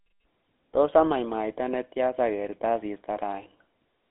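From start to finish the speech has gone through a GSM full-rate codec, and you can plainly hear it. The band is squeezed to roughly 300 Hz to 3.6 kHz, with nothing at all above 3.8 kHz, so everything sounds boxed-in and phone-like. The codec rebuilds the voice from a vocal-tract model driven by a coarse, regularly spaced pulse train, which fits the old 13 kbps full-rate coder, and that's what gives it the gritty, buzzy roughness.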